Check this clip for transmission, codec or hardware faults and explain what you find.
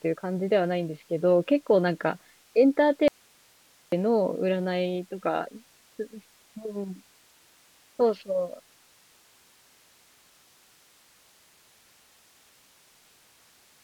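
There's one fault in this speech clip: an audio dropout to a faint residue from 3.08 to 3.92 s. The speech cuts out abruptly for about 0.84 s, leaving only hiss roughly 35 dB down, likely because the signal feed broke while the path downstream stayed live.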